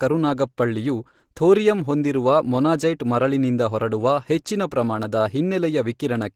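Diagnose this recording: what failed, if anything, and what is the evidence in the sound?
The codec stage failed, across the whole clip. The speech sounds hoarse and grainy throughout, and the damage is plainly audible, though content still reaches about 20.3 kHz. The cause is likely Opus compression in hybrid mode, which fits roughly 16 kbps, with starved bands filled by noise.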